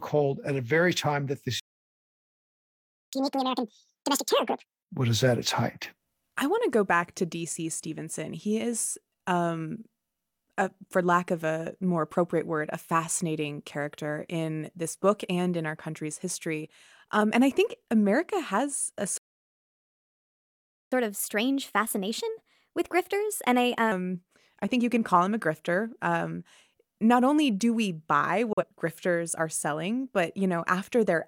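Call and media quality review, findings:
Playback stall, 1.60–3.13 s: output starved, likely buffer underrun or blocked player thread. Audio halts mid-flow, about 1.53 s of silence, then resumes.

Catch-up at higher speed, 3.13–4.66 s: player drains backlog by resampling at 2.0x. Speech rushed and chipmunk-like, pitch up roughly 10 semitones, settling to normal by "was at its height".

Playback stall, 19.18–20.92 s: second output starvation, likely the same underrun or thread block. Speech stops for about 1.74 s.

Catch-up at higher speed, 20.92–23.92 s, starting just after "has a": resampled at 1.15x to recover lost time. Mildly hurried delivery, pitch raised about 2 semitones, then back to normal.

Digital broadcast dropout, 28.53–28.64 s: receiver mutes on a bad frame, pointing to a single lost frame of about 43 ms. Abrupt 3 ms fade to silence between "only do we buy" and "grifters are selling but". 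Missing audio is not recovered.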